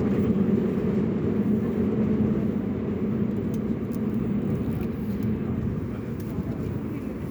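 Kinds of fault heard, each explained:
Nothing stood out on listening to this recording of sounds.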